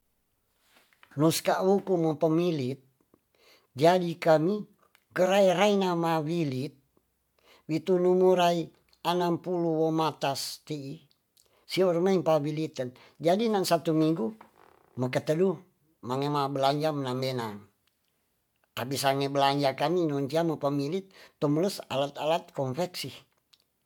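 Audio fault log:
No faults detected in this speech recording.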